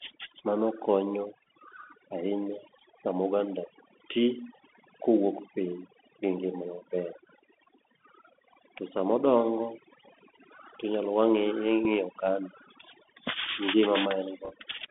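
Across the whole speech clip, overdone noise removal has gated quiet frequency bands away, leaving near-silent gaps with twinkling specks; a spectrogram shows patchy, isolated bins. The Bluetooth CVSD headset codec confines everything to roughly 250 Hz to 3.5 kHz, with scratchy sibilants and granular hiss, which fits 64 kbps CVSD. At 11.85 s, a Bluetooth headset packet repeated gives one small tick where a lost 3.8 ms packet was replayed, a single thin vertical line. From 14.45 to 14.53 s, scattered repeats produce a cluster of ticks, the longest run about 4 ms, pointing to several lost packets.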